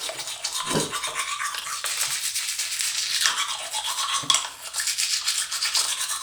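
Around 1.60 to 1.64 s, and again at 5.82 to 5.86 s, there are chunks out of order: a 20 ms chunk lands one slot late and swaps places with its neighbour. Nothing is missing, but each spot gives a brief jumbled stutter with three hard joins.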